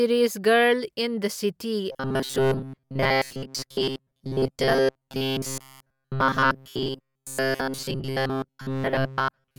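Speech, and from 1.92 s through to the end at 9.58 s it collapses into robotic sound from repeated short buffers, a stiff metallic buzz around 133 Hz. That's likely a starved stream looping chunks of roughly 7.5 ms, so most of the real audio gets skipped.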